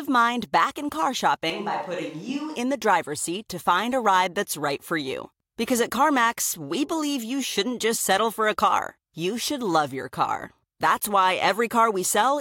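From 1.5 to 2.56 s the speech turns suddenly roomy and hollow, about 5 dB quieter with more room noise, likely a switch to a distant microphone.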